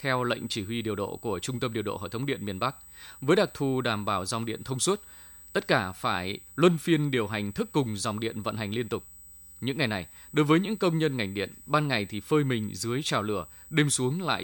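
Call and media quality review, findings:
Steady high-pitched whine under the speech throughout, 8 kHz tone with strongest component at 16 kHz, around 20 dB below signal. USB whine: bus microframe current leaking via power/ground.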